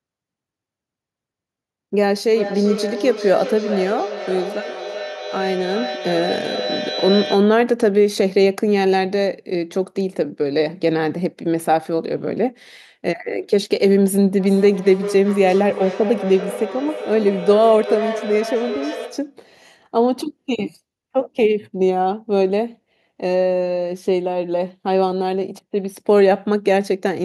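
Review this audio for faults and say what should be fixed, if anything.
Feedback echo between two devices, 2.31–7.69 s and 14.4–19.41 s: another device replays the speech into this microphone, so it returns roughly every 400 ms at about -9 dB. On a spectrogram this appears as evenly spaced copies. To prevent it, join only one device per room or mute the other's speaker.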